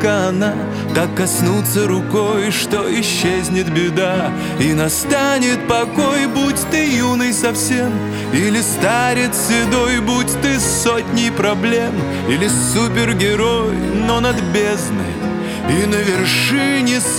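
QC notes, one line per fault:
No faults found in this clip. Nothing in the audio calls for a timed entry.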